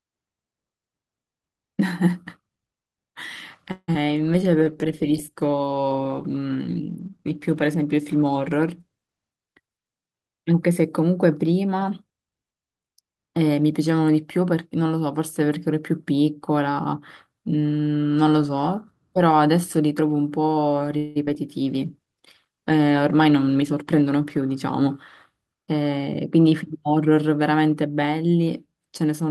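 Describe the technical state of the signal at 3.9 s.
At 3.9 s the signal sits inside a burst of repeated packet loss, from 3.71 to 4.11 s. Three gaps arrive in quick succession, the longest 166 ms. Each is patched by extending the previous sound, together covering 172 ms. Another 61 ms is simply missing. The speech turns choppy, with pieces missing.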